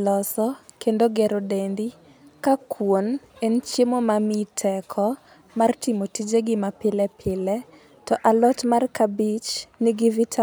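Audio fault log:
Nothing stood out on listening to this speech recording.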